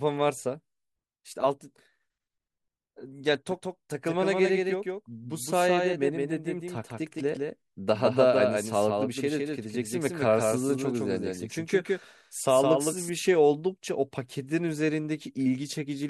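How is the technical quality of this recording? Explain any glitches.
The recording has one clear fault, a doubled audio track running from 3.51 s to 13.09 s. Across that span a second full-band copy of the speech trails the original by around 150 ms, roughly 5 dB quieter, with no decay or room colour. It is likely caused by the same signal being captured again through a slower path. It sounds like a dry slapback echo that appears and vanishes abruptly. On a waveform and spectrogram, each burst of energy is shadowed by a slightly fainter replica shifted right by a fixed gap.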